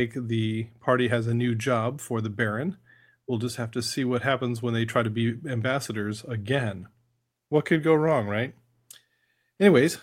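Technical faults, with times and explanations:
No technical faults can be heard in this speech clip. Nothing in the recording calls for a time or an explanation.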